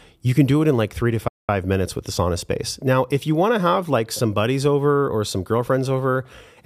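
From 1.28 to 1.49 s, between "in like three to" and "minutes with the sauna", a playback stall silences the speech, likely from the player running out of data. The waveform goes flat and the spectrogram shows an empty gap.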